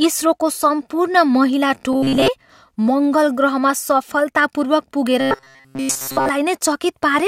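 From 1.93 to 2.28 s, and again from 5.20 to 6.29 s, the speech collapses into robotic sound from repeated short buffers: a rigid, metallic buzz locked at 134 Hz that still loosely tracks the talking. The likely cause is audio arriving too late, so a fragment of roughly 7.5 ms is looped while most of the real signal is skipped. Unlike a dropout, nothing goes silent, and the buzz pitch never moves with intonation.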